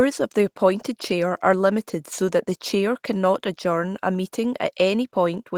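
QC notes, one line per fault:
No faults found in this speech clip. There is nothing to log against any time in it.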